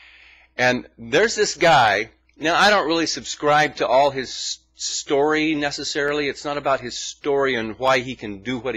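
At 6.08 s and again at 7.88 s there is a single sharp click, each showing as a thin vertical line spanning the spectrum. Both are likely dropped samples: a tiny fraction of a millisecond is missing, so the waveform jumps straight to a later value. Unlike a dropout, no stretch of sound goes silent or missing. The lost span is far too short to hear as a gap, leaving only the isolated click.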